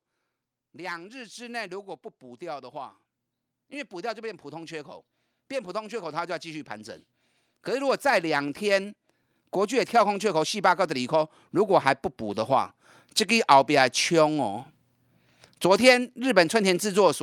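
Automatic gain rising occurs three times in this speech: 0.59 to 3.01 s (about 5 dB), 3.68 to 6.76 s (about 6 dB) and 7.47 to 12.77 s (about 9 dB). Each time the gain control judges the input too quiet and gradually lifts it, so voice and background swell together.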